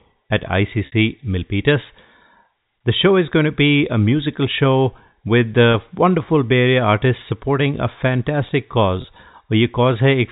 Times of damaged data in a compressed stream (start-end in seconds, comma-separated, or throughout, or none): none